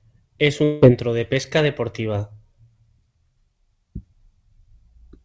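A long network dropout runs from 0.64 to 0.84 s. For about 0.2 s the speech gives way to a smeared, buzzy continuation of the last sound instead of new material, and the speech then resumes further on with that stretch simply gone. The gap never falls to silence: the whole lost span is filled by this extended tail, most likely a receiver concealing packets that never arrived. Throughout, the band stops at 8 kHz, which fits a wideband call codec.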